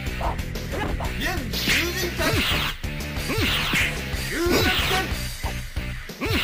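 Dropped buffers (overrun) at 2.30 s and 3.29 s: jumps where the audio skips ahead, likely from samples overwritten before being read, losing a few milliseconds, then roughly 15 ms.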